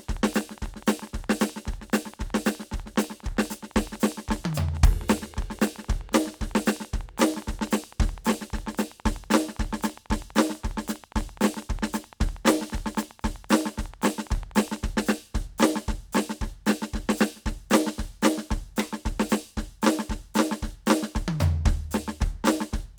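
A piece of music carries a train of clicks from 0.09 s to 14.85 s: a steady ticking at about 12 clicks per second, some two hundred in all, each about as loud as the music itself. The pulses keep the same shape and an even spacing, which sets them apart from random crackle or isolated pops. The likely cause is electrical interference from nearby equipment or a faulty connection or power supply.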